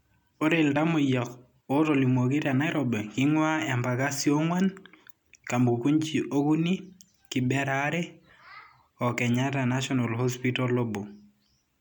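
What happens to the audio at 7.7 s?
Nothing goes wrong at 7.7 s; the speech there plays through intact, with no dropout, glitch or other fault.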